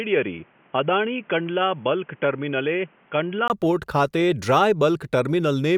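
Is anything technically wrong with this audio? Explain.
Yes. From 0.0 to 3.50 s the speech is dull and boxy, with nothing above 3.4 kHz, slightly quieter, and carries its own noise floor roughly 35 dB down. This is likely an input switched to a poorer device, a narrowband microphone path. A 20 ms gap precedes "પોર્ટ ખાતે" as full bandwidth returns.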